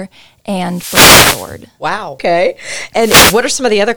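At 0.64 to 1.63 s and again at 2.95 to 3.47 s, wireless microphone noise hits break in: the analogue FM radio link fades, receiver static surges as a swish over the speech, then recedes. Unlike a digital dropout, the sound is masked by noise rather than muted.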